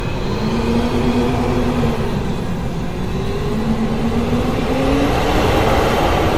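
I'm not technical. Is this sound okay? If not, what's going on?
No. Throughout, the sound is swirly, smeared and hollow, with blurred onsets and nothing above 18.7 kHz. That is generation loss, most likely from being compressed and decompressed around seven times, each pass adding fresh damage.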